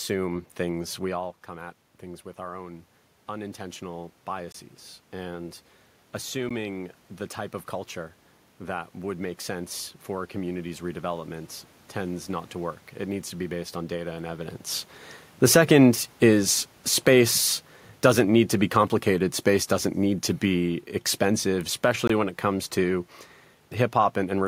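Automatic gain rising runs from 0.76 to 14.6 s in this speech clip: after the talker backs off the microphone near 1 s, the control slowly adds about 11 dB, lifting voice and room noise together. Blocks of digital silence appear at 4.52 to 4.54 s, at 6.49 s, and at 22.07 to 22.10 s, each a 16 to 21 ms hole where the sound cuts out and back with no fade. The output buffer likely wasn't filled in time, and the 21 ms gaps fit a 1024-sample buffer. Automatic gain falling follows from 15.34 s to the end: once the talker comes closer again around 14.5 s, the now-loud input makes the control pull its gain back down, so voice and background sink together.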